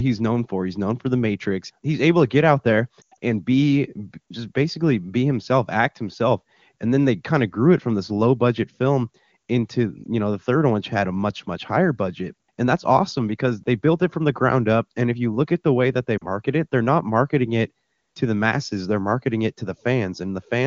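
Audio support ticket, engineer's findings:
Lost AMR speech frames. At 3.01–3.17 s, after "to get out there", the sound drops toward near silence, with a longest gap near 100 ms; it returns rough. Brief warbles at 10.04–10.06 s, before "you know the third", and 16.17–16.26 s, after "the way that they". Decoder concealment repeats the last good parameters with falling gain. The AMR-WB path at 23.85 kbit/s is clear around these gaps.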